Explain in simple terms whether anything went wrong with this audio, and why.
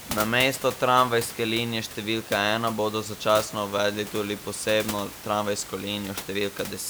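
Nothing went wrong with this audio; the background noise is simply the room the microphone was in.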